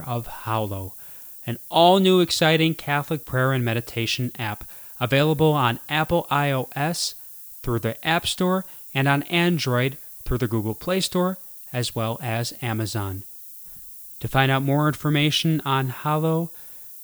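From start to finish the speech carries a steady, thin hiss that climbs sharply toward the top of the band. This is low bit depth with noise shaping. The coarseness of the quantisation points to an 8-bit word. The rounding error was fed back so that it was pushed up into the highest frequencies instead of being spread evenly. The result sits only about 20 dB below the speech, bright and constant even through pauses.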